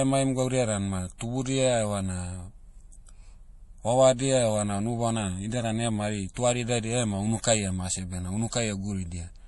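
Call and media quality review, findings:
Watery, swirly speech with nothing above 11.4 kHz for the whole clip. Likely MP3 compression at a low bitrate, which fits about 48 kbps; the encoder drops treble and flickers weak bands on and off.

Short hiss smearing onsets at 1.18 s (after "emaim gaudia dan ma"), 6.34 s (after "idia dan ema hari"), 7.41 s and 8.50 s, each 24 to 27 ms. Pre-echo: block-spread codec noise leaks before the attacks.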